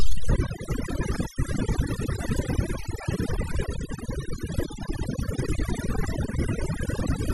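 Throughout the speech, overdone noise removal leaves the background near-silent with twinkling specks, while quieter parts of the voice are cut away with it. Bands near the noise estimate were cut far down, so the spectrogram shows scattered isolated blips between speech and ragged, hollowed harmonics.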